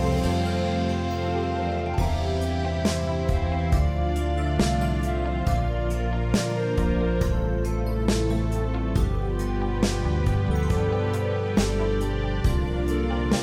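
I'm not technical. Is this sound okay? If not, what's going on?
Yes, this one sounds fine, with nothing going wrong anywhere in it that you'd need to worry about.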